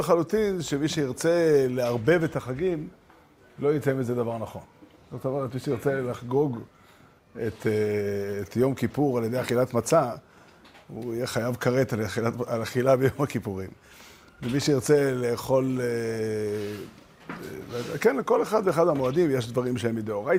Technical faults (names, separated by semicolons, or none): none